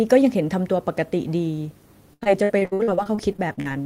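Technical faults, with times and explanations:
2.13–3.67 s, repeated packet loss (robotic sound): fifteen short holes, the longest about 79 ms, each patched by stretching the preceding sound, so about a third of this span is synthetic fill, giving choppy speech with fragments missing.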